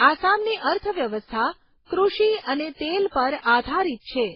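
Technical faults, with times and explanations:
Throughout, transcoding between lossy codecs: the speech has nothing above 5.6 kHz, and two coders' different artefacts are heard together, which fits a 16 kbit/s MP3 likely re-encoded as 32 kbit/s Opus. A single encode would leave one artefact type, not two layered together.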